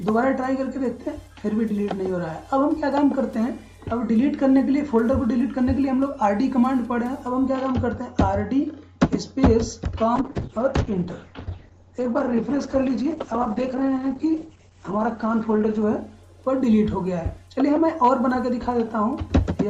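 From 10.16 s to 15.93 s there is a call bitrate drop. The encoder starves for bits. High frequencies vanish above 8 kHz, down from 20 kHz. The sound turns muffled, rough and watery. This fits a fall from roughly 64 to 9 kbps.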